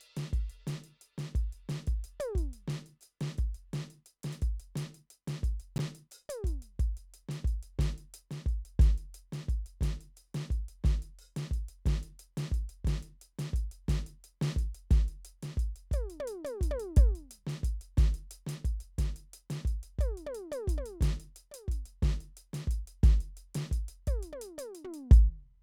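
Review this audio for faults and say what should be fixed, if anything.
A 20 ms chunk of the music was written one chunk late, so chunks out of order swap two neighbouring slices between 5.76 and 5.80 s. Nothing is lost, but the reordered audio jumbles briefly at three hard joins. Reordering buffered chunks by sequence number before playback, and waiting for a late chunk rather than skipping past it, would prevent this.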